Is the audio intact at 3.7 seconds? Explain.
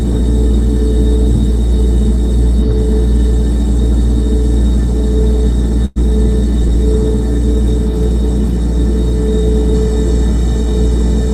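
Yes, the audio is intact at 3.7 seconds, with no dropout, click, distortion or other fault audible at that moment.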